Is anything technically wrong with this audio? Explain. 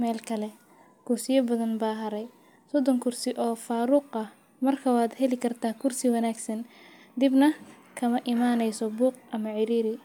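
No, nothing is technically wrong with this audio.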